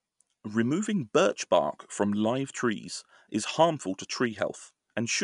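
No technical fault can be heard anywhere in the recording; the signal stays continuous and steady throughout.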